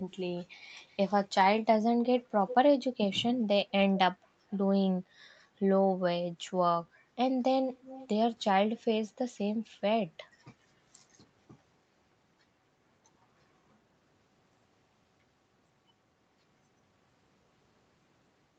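Brief ghostly repeats of the speech trail it by 363 ms at 0.87–0.97 s, 2.48–2.54 s (loudest), 4.5–4.58 s and 7.7–8.08 s. This is echo leak, likely from a far-end loudspeaker's echo canceller missing some of the sound.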